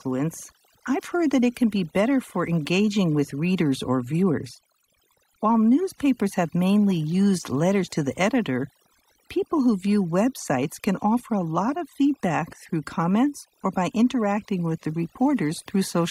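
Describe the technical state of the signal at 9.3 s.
At 9.3 s the speech carries overdone noise removal, present across the whole clip. Frequency bands near the noise floor are cut hard. The background twinkles.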